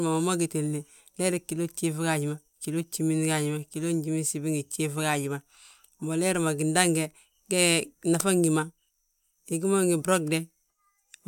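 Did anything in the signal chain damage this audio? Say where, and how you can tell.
No, nothing in the signal chain has audibly damaged this speech recording, and the signal holds steady with no point where any stage can be heard breaking down.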